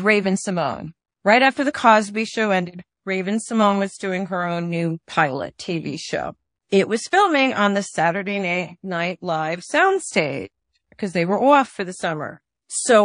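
A speech recording carrying plainly audible codec damage from start to finish, likely MP3 compression at a low rate, roughly what a 40 kbps encode produces. Weak frequency detail flickers in and out between frames, giving a watery, swirling texture with metallic chirps on sibilants. Unlike simple low-pass filtering or a narrowband channel, the damage keeps shifting from moment to moment rather than sitting as a steady loss of brightness. A distinct pre-echo appears from 6.69 to 6.72 s. A burst of hiss about 19 dB above the surrounding floor spreads 32 ms ahead of a sharp attack, which itself sounds blunted. The noise meant for the loud onset has been spread across the whole transform block, which fits a long window of about 52 ms with no switch to short blocks. It differs from a click or dropout because the noise leads the transient rather than interrupting it, and it is tied to that onset rather than lying across the signal like ordinary broadband noise.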